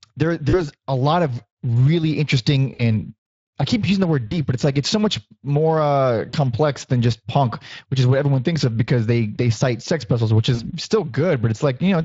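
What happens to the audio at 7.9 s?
At 7.9 s the speech is passing through the Speex codec, as it does for the whole clip. This CELP coder rebuilds speech from a vocal-tract filter driven by a coded excitation, and here it runs at roughly 20 kbps. That coarse excitation leaves the speech at that moment plainly degraded: noisy and hoarse, with a gritty roughness over the voicing.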